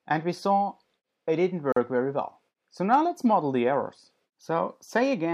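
At 1.72 s the sound drops out for about 43 ms, until 1.76 s. This is a gap at a join of encoded pieces. Two separately encoded sections were butted together with their encoder delay and end padding left in. The silence has smeared edges. The sound then resumes where it stopped.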